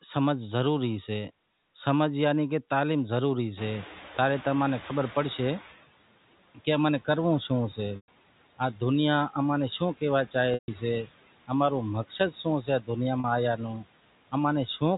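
A speech clip with noise suppressor artifacts throughout: the suppressor pulls steady background down by about 17 dB frame by frame, so the noise dips between phrases and swells under them. At about 3.5 s the room noise jumps by about 23 dB, and from 3.57 to 5.75 s the noise suppressor is catching up. Its noise estimate lags the new level, so the louder background passes with only about 11 dB of reduction before sinking over roughly 2.2 s as the estimate adapts. Packet loss with pitch repetition occurs three times. At 7.96–8.08 s (120 ms) and 10.54–10.68 s (140 ms), the gap is longer than the roughly 50 ms fade, so the repeated pitch period dies into silence and speech returns through a short cross-fade. At 13.2 s the 40 ms loss is bridged by a brief held, buzzy tone. Both suggest 20 ms packets. Between 12.62 and 12.89 s the speech is cut by the noise suppressor. Roughly a tenth of a second of low-level speech is treated as noise and dropped by up to about 14 dB, so it sounds swallowed.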